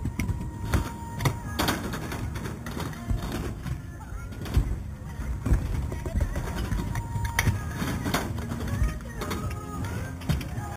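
Throughout, imaging from sample-and-hold upsampling, which fits an 8 kHz source, mirrors a metallic fizz into 4 to 8 kHz, about 18 dB down. Unlike steady hiss, it tracks the sound's level.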